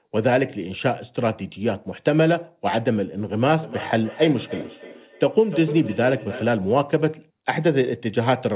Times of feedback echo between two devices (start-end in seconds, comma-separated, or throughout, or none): 3.62-6.74